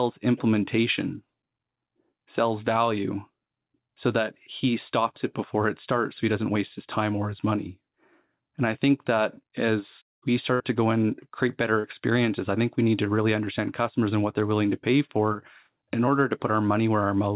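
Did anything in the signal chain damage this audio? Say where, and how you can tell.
Yes, the network. A burst of packet loss at 10.54 to 10.62 s, after "think that as we", leaves about 56 ms of the held last sound fading out, then a jump.

Short concealed packet loss at 11.80 to 11.86 s, after "go and create better": about 40 ms synthesised from the preceding sound, heard as a brief smear before the audio blends back in.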